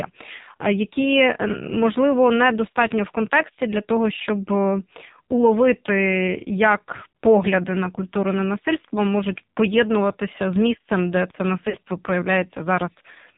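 Throughout, the speech is thin and muffled with nothing above 4 kHz, and it has a heavy buzzy, synthetic edge. This is the AMR narrowband mobile codec. The audio is carried at 8 kHz sampling, and each frame is rebuilt from a vocal tract model excited by a few pulses. The amount of damage suggests one of the lowest AMR-NB modes, around 5.9 kbps, where too few bits remain to capture the natural texture of the voice.

From 11.70 to 11.77 s the speech briefly warbles and sags in level for about 40 ms, then comes back slightly rough. These are lost AMR speech frames. The frames failed their error check, so the decoder filled the gap by repeating the last good pitch and vocal tract settings at reduced gain. The length points to about two 20 ms frames, which is too short for the concealment to fade fully to silence.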